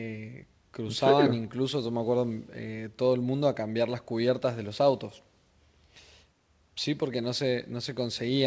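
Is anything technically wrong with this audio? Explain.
No, there is no fault here: the speech has nothing above 8 kHz, which fits a wideband call codec such as G.722 at 64 kbps and is the expected ceiling for that call path.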